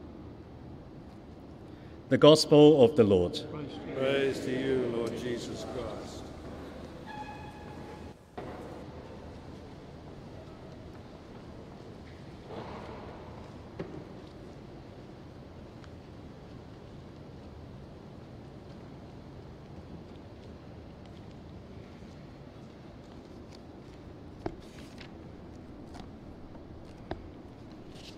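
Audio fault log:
Nothing to log here; no faults turned up anywhere in the audio.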